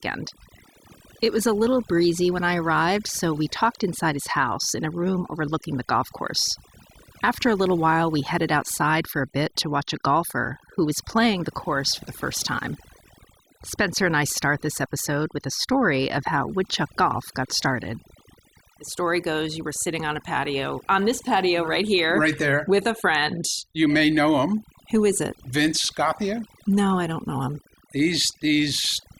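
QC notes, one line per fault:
throughout: overdone noise removal. A noise reducer pushed too hard cuts individual frequency bands down or out whenever they sit close to its noise estimate, taking quieter parts of the speech along, so the background drops and breaks up into twinkling specks.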